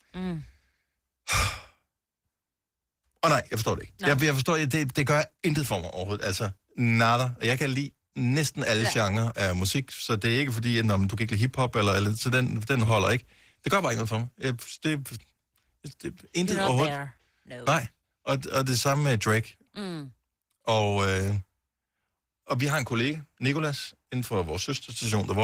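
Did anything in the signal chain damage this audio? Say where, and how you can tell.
Yes. The damage comes from the codec stage, Opus voice compression, and it runs through the whole speech clip. The speech sounds rough and slightly hoarse, with a faint robotic grain. The top end stays present rather than cut off, which points to Opus running in hybrid mode. A linear-prediction coder handles the low band, and a transform layer fills in above 8 kHz. The excitation is coded coarsely, which fits a rate around 16 kbps in 20 ms frames.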